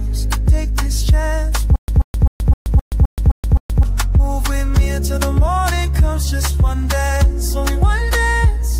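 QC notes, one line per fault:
1.76–3.83 s, stutter with silent gaps: a short burst of about 134 ms plays, then drops to digital silence for about 125 ms. The same fragment returns eight times at an even period of about 259 ms. It sounds mechanical because each repeat is identical and the gaps are truly empty. The likely cause is a stalled player or stream replaying its last fragment on each retry. The audio meant for this span is lost.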